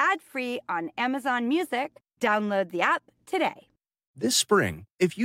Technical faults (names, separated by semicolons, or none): none